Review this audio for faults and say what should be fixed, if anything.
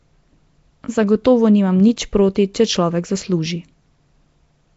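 Throughout, the speech has a rough, hissy, underwater smear and nothing above 7.7 kHz. This is likely Nellymoser compression, which fills bit-starved bands with noise, and the sound fits about 32 kbps. Capture or archive with a modern codec such as Opus at a higher bitrate, or as PCM.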